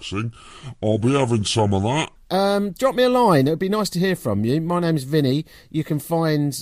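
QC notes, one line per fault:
0.00–2.16 s, section at the wrong speed: the opening stretch was likely clocked wrongly on playback, running at 0.695 times its recorded rate, so the speech drags slow and drops roughly seven semitones in pitch until the rate jumps back at 2.16 s.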